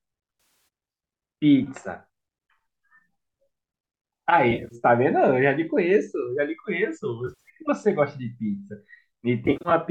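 AAC frame loss with concealment strikes four times, from 0.40 to 0.68 s, 4.51 to 4.75 s, 7.27 to 7.49 s and 9.46 to 9.71 s. Short runs of frames drop out, which fits frames of about 10 ms, and the decoder patches each gap from the last good spectrum. The speech turns smeared and noisy in brief scattered flickers, with the third patch holding longest, around a tenth of a second. The coding underneath, likely low-delay AAC, adds only light roughness.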